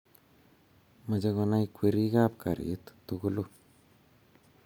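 Listening to this speech recording, nothing technically amiss stood out at any point.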